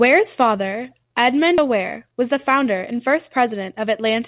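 At 1.58 to 1.60 s the speech has a skip ahead. Roughly 0.4 s of audio never reaches the output, most likely because the jitter buffer overflowed and discarded it while later packets were already queued. Nothing fills the hole, so the material on either side is butted together almost directly. The listener hears an abrupt forward jump, with a syllable or more simply missing. The timing shift lowers the playout delay by about the same amount.

From 1.68 to 3.87 s a jitter buffer speed-up follows. The buffer was still holding more audio than its target, so the receiver repeatedly trimmed short pitch-period-sized pieces, removing around 150 ms in total. Playback runs at about 107% of normal speed with the pitch unchanged, and the speech sounds slightly rushed over those two seconds. Throughout, the narrow band with nothing above 4 kHz fits the G.711 A-law call codec at 64 kbps.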